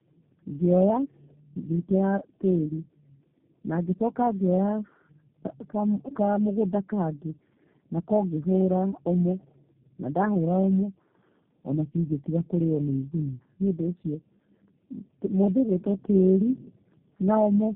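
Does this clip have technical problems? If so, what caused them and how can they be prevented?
Yes. The speech is rough, muffled and warbly throughout, with nothing above 3.8 kHz. This is tandem speech coding, consistent with three successive G.729A encodings, each degrading the last one's output. Preventing it means routing calls with transcoder-free operation, keeping one codec end to end.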